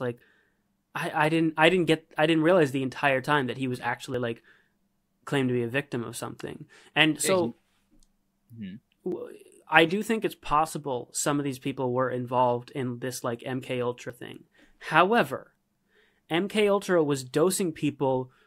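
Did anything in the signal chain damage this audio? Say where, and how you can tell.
Yes. Brief skips at 4.14, 9.12 and 14.10 s, evenly spaced about 5 s apart, point to audio missing between chunks, likely at the recorder's buffer stage: roughly 20 ms vanishes at each chunk boundary, seen as abrupt waveform discontinuities and thin vertical spectrogram lines.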